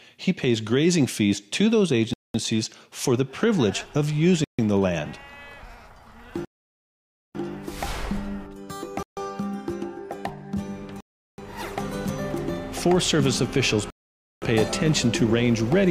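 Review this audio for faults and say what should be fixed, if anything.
The sound cuts to silence and resumes at 2.13 s (210 ms), 4.44 s (142 ms), 6.45 s (900 ms), 9.03 s (141 ms), 11.00 s (378 ms) and 13.90 s (518 ms). This is likely a Bluetooth stall: interference delays packets, the headphones' buffer runs empty, and playback waits for the resent packets. To prevent it, keep the headphones close to the source, away from other 2.4 GHz traffic, or use a deeper receive buffer.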